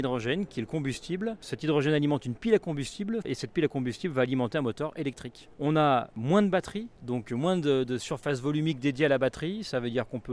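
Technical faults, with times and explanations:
No technical faults can be heard anywhere here.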